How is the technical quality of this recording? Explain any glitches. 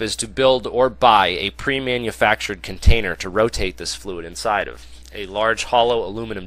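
No glitches or technical faults are audible anywhere in the recording.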